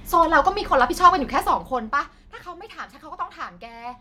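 Nothing stood out as a technical fault on listening to this speech.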